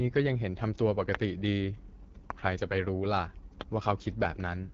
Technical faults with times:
0.00-4.74 AMR wideband (HD Voice) codec
1.15-1.17 loud pop
2.30-2.32 loud pop
3.61-3.63 loud pop

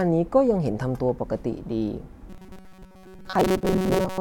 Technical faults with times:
2.29-4.20 robotic sound from repeated short buffers

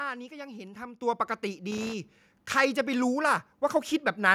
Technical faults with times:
1.02 microphone volume stepped up
1.71-1.93 loose connector crackle

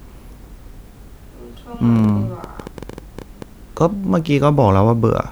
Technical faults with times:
1.96-3.43 train of clicks

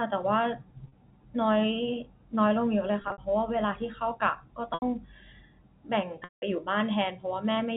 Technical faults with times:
0.88-0.92 packet loss with pitch repetition
3.02-3.18 packet loss with pitch repetition
4.74-4.82 packet loss with pitch repetition
6.24-6.42 packet loss with pitch repetition

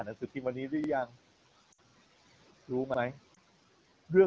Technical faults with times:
0.84-0.89 overlapping chunks
1.06-1.16 speech cut by the noise suppressor
1.72-1.78 lost AMR speech frames
1.89-1.94 overlapping chunks
2.94-2.99 overlapping chunks
3.34-3.37 lost AMR speech frames
3.99-4.04 overlapping chunks

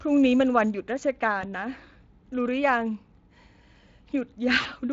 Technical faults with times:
1.41-1.45 VoIP packet loss concealed by the speech codec
4.61-4.68 VoIP packet loss concealed by the speech codec

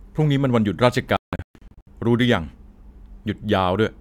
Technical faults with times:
1.17-1.87 digital broadcast dropout

